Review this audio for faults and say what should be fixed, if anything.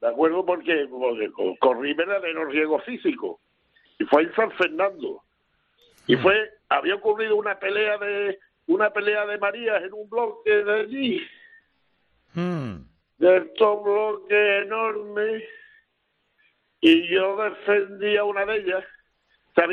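From 10.22 to 18.06 s there is a time-stretched section. The sound slows abruptly to about 0.55 speed while its pitch stays the same, likely from software repeating short pieces to lengthen it. On a spectrogram, features stretch horizontally and onsets blur or double. To prevent it, edit the material to fit the required length instead of stretching it.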